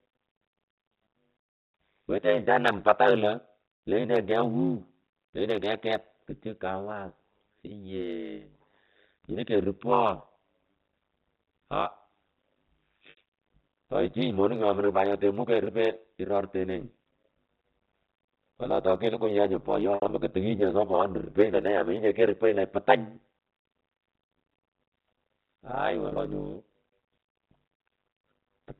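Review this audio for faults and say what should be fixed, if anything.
Overlap-add ripple runs through the whole clip. The windowed frames don't sum to constant gain, so the level swings about 60 dB at around 100 Hz, producing a metallic buzz.

Packet loss with pitch repetition occurs at 13.1 to 13.17 s (70 ms lost), 19.95 to 20.09 s (110 ms scattered over 140 ms), and 26.06 to 26.18 s (90 ms over 120 ms). Each time the last pitch period repeats, then fades as the gap is bridged.

Prevention: use a window and hop pair that satisfies constant overlap-add, and protect the stream with jitter buffering or forward error correction so packets aren't dropped.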